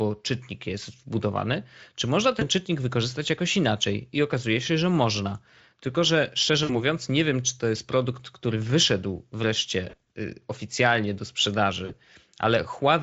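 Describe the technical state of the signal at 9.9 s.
At 9.9 s the signal shows VoIP packet loss concealed by the speech codec, running from about 9.89 to 10.05 s. About 80 ms of audio is missing, scattered across 160 ms in gaps of up to 40 ms, which fits four lost 20 ms frames. For each gap, the decoder extends its last pitch and spectral envelope at falling gain. The speech smears into a brief buzzy tone or coloured noise that fades, and stays weak for a moment after the stream resumes.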